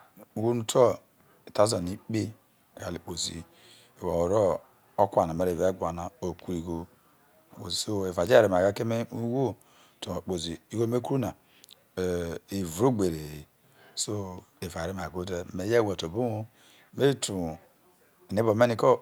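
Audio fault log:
8.27 s, bit error spike: right after "so eva", a single flipped sample jumps to about -14 dBFS, giving one sharp tick: a lone waveform spike and a thin full-band vertical line on a spectrogram.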